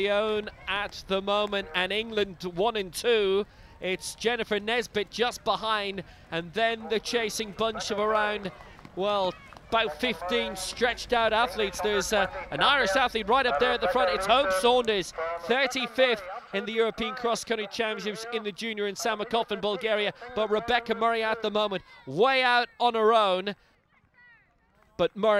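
Nothing goes wrong anywhere in this one; there's no technical fault to point to at any moment, so there's simply nothing to flag.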